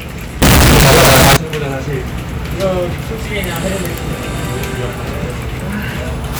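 From 0.42 s to 1.37 s, the samples were most likely written as 32-bit float but read back as 32-bit integer, a float read as integer fault. Each sample's sign and exponent bits now dominate its value, so the waveform collapses into a near-square shape at an almost fixed, high level, regardless of how quiet the original was. The passage turns very loud and harsh, with background noise pushed up level with the main sound, though its pitch can still be followed.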